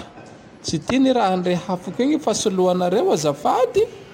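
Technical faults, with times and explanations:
2.44 to 4.13 s, crude rate conversion: the speech is resampled by dropping and repeating samples without filtering, consistent with 48 kHz to 44.1 kHz, adding a gritty inharmonic fizz about 30 dB down.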